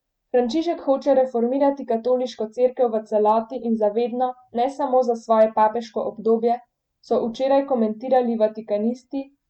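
The speech hits hard clipping at 0.92 s, at 3.29 s after "cerkev v", from 5.32 to 5.62 s after "vedno ne samo za", and at 8.16 s. Peaks overrun the stage by up to about 2 dB and get squared off, so you hear brief crackles on the peaks.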